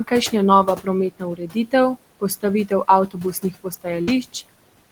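Throughout, the noise suppressor is pulling the steady background down by about 18 dB frame by frame, so the room noise, sitting about 19 dB below the speech, pumps between words. Between 1.11 and 1.73 s, and again at 3.07 to 3.17 s and 3.42 to 3.87 s, the noise suppressor mistakes speech for noise and cuts it by about 15 to 16 dB, roughly a third of a second in the first stretch and about a tenth in each later one, so those sounds come across swallowed and faint. From 4.01 to 4.09 s a burst of packet loss forces the receiver to extend the last sound for 60 ms while fading it, heard as a brief held buzz or hiss, before the audio resumes with another 60 ms skipped.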